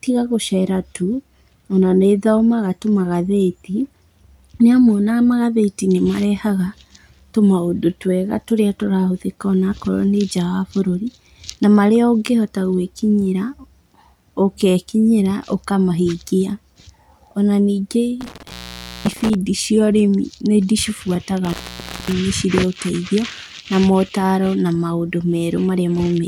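The speech drops out twice, with crackle at the edges and faint hiss in the gaps: an intermittent contact, a loose cable or plug opening for about 0.53 s from 18.21 s and 0.55 s from 21.45 s.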